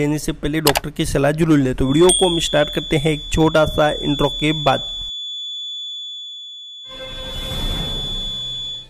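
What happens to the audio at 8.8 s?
A loudspeaker-to-microphone loop, likely sitting at the edge of feedback, sustains a feedback whistle at 3.4 kHz from 1.78 s to the end. At 8.8 s a thin, steady tone sits about 10 dB under the sound, swelling and fading slowly in level.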